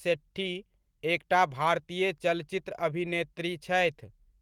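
No technical faults can be heard anywhere in this speech recording. There is nothing in the audio to point to or time.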